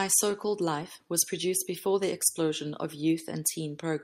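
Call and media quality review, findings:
Nothing stood out on listening to the speech in this recording.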